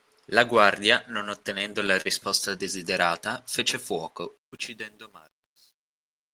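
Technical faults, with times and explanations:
1.43–2.07 s, repeated stalls (stutter): the audio hitches five times, briefly holding and stretching the preceding sound, about 79 ms in total with the longest hold 38 ms. Packets arrived late, the jitter buffer kept emptying, and the receiver extended the last sound rather than dropping anything.
4.37–6.33 s, truncation distortion on a fade: as the fade-out starting around 4.4 s gets quieter, the tail turns gritty, worst from 4.72 s. The fade keeps only 10 bits with no dither, so low levels collapse into coarse square steps.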